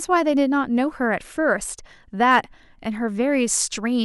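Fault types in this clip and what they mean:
hard clipping: the speech briefly drives past the level the signal path can carry, by about 2 dB, so peaks between 2.29 and 2.38 s are sliced flat, giving a short crackle. The waveform shows squared-off tops; the spectrogram shows a brief wideband smear of added harmonics.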